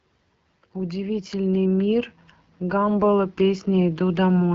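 From start to finish the speech carries the sound of the AMR wideband (HD Voice) codec at a low rate, with a rough, raspy texture that fits its 8.85 kbit/s mode. At this setting the codec has too few bits to model the pulse excitation and vocal tract shape accurately, so the coding damage is plainly audible. The band from 6.4 kHz up is filled with shaped noise rather than real detail, and nothing is present above 7.7 kHz.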